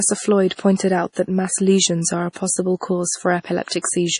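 The encoder ran short of bits, so it cut all treble above 10.6 kHz and dropped weak frequency lines that flicker in and out between frames. This is likely heavy MP3 compression, at a rate that fits about 32 kbps. Throughout the speech the top end is dull and the sound is watery and swirly, with metallic chirps on s sounds and softened attacks.

Pre-echo follows from the same coding. The quantisation noise is spread across a whole block, so noise sized for a sharp onset also fills the quiet moment before it. A short hiss runs ahead of the attack from 0.77 to 0.80 s (28 ms), just before "out that mass lesions". It happens again from 2.33 to 2.36 s (30 ms), after "mass lesions are a", and from 3.80 to 3.84 s (47 ms). Each of those onsets sounds smeared.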